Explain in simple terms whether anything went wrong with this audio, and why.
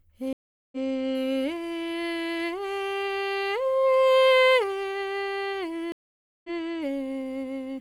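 Two stream reconnects break the music, at 0.33 to 0.77 s and 5.92 to 6.5 s. After each silence the music jumps ahead by roughly 0.2 s and 0.4 s, so unlike a dropout, some music is skipped.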